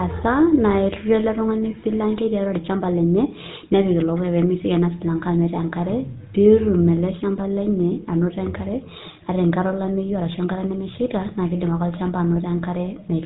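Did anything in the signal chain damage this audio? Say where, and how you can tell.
Yes. Across the whole speech clip there is a plainly audible buzzy, gravelly roughness, and the top end stops dead at about 3.8 kHz, so sibilants sound dull. That points to the codec stage, specifically the GSM full-rate codec, and the level of damage fits its 13 kbps rate. It rebuilds the voice from a vocal-tract filter excited by a sparse, evenly spaced pulse train, which gives speech this grainy edge, and it carries nothing above 4 kHz.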